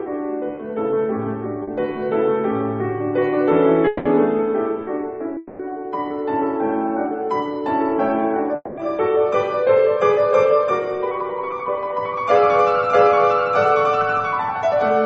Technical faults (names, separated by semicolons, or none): short concealed packet loss; long network dropout